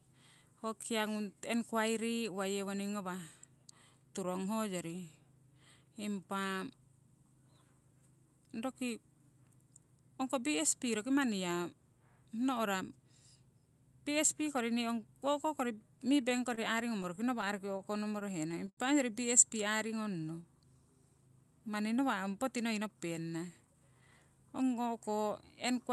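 From 16.29 to 18.79 s the speech shows repeated stalls (stutter). Packets arrived late, and the jitter buffer kept running dry. Sixteen times the receiver stretched the last sound to fill the gap, the longest about 78 ms, about 260 ms in all. Nothing is lost, but it drags and stutters.

From 19.64 to 20.62 s comes a jitter buffer slow-down. The buffer was low, so the receiver repeated pitch periods to rebuild its reserve. About 82 ms was added, slowing playback to 93% of normal speed. Pitch stays the same, and the speech sounds drawn out.

From 22.64 to 24.09 s there is a jitter buffer speed-up. Too much audio had built up, so the receiver cut short pieces of pitch periods to reduce the delay. About a fifth of a second was removed, with playback at 112% of normal speed. The speech sounds hurried at unchanged pitch.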